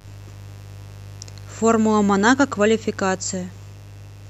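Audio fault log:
throughout, mains buzz: a steady, raspy buzz sits under the speech, roughly 25 dB down, locked to 50 Hz mains. Sharp switching spikes, such as those from a dimmer, rectifier or missing shield, arrive twice per cycle. That gives a 100 Hz pulse rate with harmonics stretching up to several kHz. This distinguishes it from plain hum, which would be a smooth, low tone near 50 Hz without the edgy, bright upper content.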